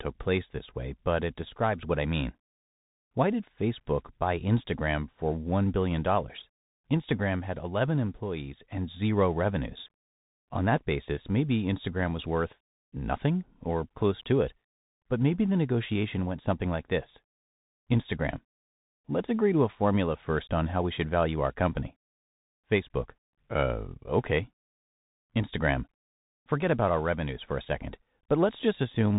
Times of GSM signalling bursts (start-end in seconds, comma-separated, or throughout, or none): none